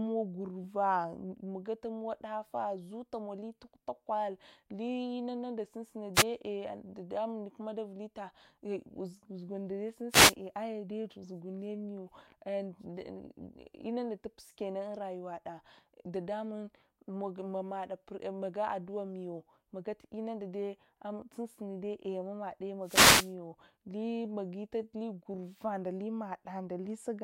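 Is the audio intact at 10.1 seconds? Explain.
No, there's a wireless microphone noise hit from 10.09 to 10.35 s: the FM radio link fades, receiver noise surges, and you hear a brief static swish over the speech.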